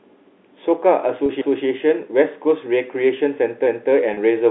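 At 1.26 to 1.29 s the speech briefly holds on a slightly buzzy, sustained tone. This is packet loss with pitch repetition: about 30 ms went missing, consistent with a single lost packet, and the last pitch period was repeated to fill it. From 1.41 to 1.67 s a 250 ms stretch plays twice as an audible stutter, and the same stutter returns at 3.66 to 3.92 s. These are overlapping chunks: each 2 s chunk starts before the previous one has finished, so the join is heard twice. At 4.14 to 4.17 s the held buzz comes back, another 30 ms gap bridged by pitch repetition. All of this sits within the narrow telephone band of the G.711 coding.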